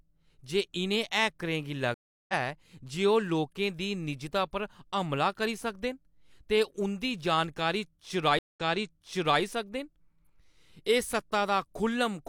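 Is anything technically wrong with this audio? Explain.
Yes. Two stream reconnects occur in this speech. At 1.94 to 2.33 s and again at 8.39 to 9.41 s, the connection dropped and the player restarted decoding mid-stream. The first gap is 345 ms of silence, after which the speech resumes about 150 ms later than where it stopped. The second is 170 ms of silence, followed by a jump back of 0.85 s, so that stretch of speech repeats.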